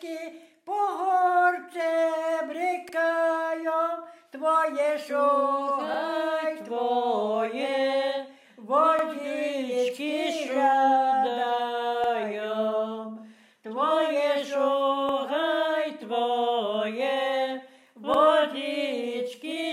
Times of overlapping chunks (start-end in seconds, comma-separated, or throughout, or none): 2.89-2.94, 5.94-5.99, 8.99-9.04, 12.04-12.09, 15.09-15.14, 18.14-18.19